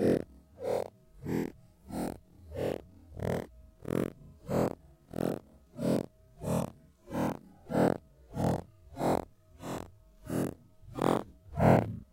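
No audible technical faults anywhere in the recording.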